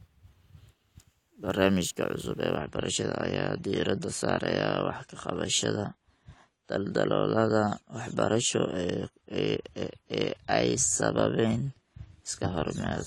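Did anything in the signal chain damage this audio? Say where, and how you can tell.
Yes, at the network stage: from 2.57 s to the end, the adaptive stream switches to a lower bitrate. The treble abruptly thins with no gap, which fits AAC dropping from 96 to 32 kbit/s. A spectrogram shows content above 11.5 kHz vanishing at that instant, while the waveform stays continuous.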